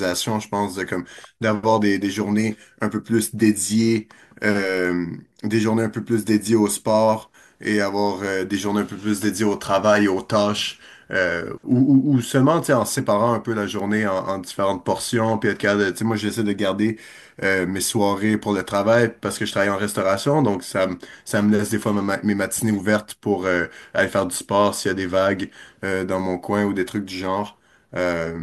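Two isolated sharp ticks sit in the speech, at 13.80 s and 20.17 s, the second louder at about -11 dBFS against about -17 dBFS. Each is a bit error spike: one flipped bit throws a single sample off by a power of two, producing a broadband click unrelated to the speech.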